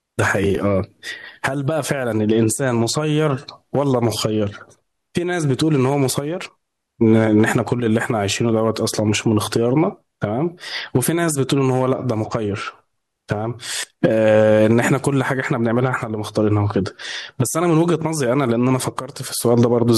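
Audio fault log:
No faults detected in this speech recording.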